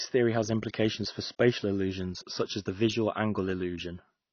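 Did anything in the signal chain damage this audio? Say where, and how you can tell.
Yes: the codec stage. Throughout, the speech sounds dull and smeared with fizzy, warbling sibilants, likely AAC compression near 24 kbps. A plain low-pass filter wouldn't warble.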